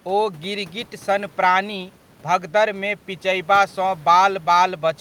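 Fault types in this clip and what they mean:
Nothing's gone wrong with the system here; the faint room noise, sitting about 32 dB under the speech, was simply in the air when it was recorded.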